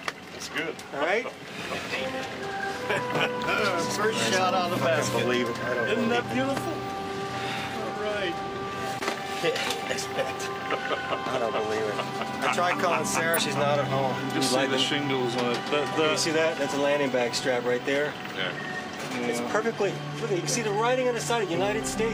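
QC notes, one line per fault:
8.97–9.02 s, 13.33–13.39 s, 19.56–19.62 s: damaged data in a compressed stream; the decoder misreads corrupted frames and loses sync, causing brief chirp, click or dropout disturbances.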